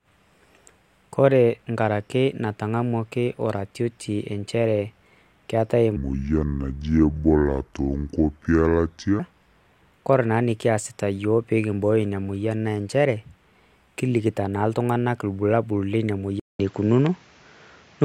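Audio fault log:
5.96 to 9.19 s, section at the wrong speed: this stretch of speech plays at 0.674 times its original rate, so it drags noticeably and the voice drops by roughly seven semitones, turning deep and sluggish. Pitch and tempo fall together and snap back at both boundaries, which points to playback against a mismatched clock rather than a deliberate effect. The likely cause is a resampling or clock-rate error applied to that segment during editing or playback.
16.40 to 18.04 s, input switched to a poorer device: a gap of about 200 ms marks the changeover, after which the band narrows and the sound turns duller and boxier. A new noise floor sits around 45 dB below the speech, and the level shifts by around 5 dB. This points to a different capture chain, likely the system moving to another microphone or a headset's call profile near the end of the recording.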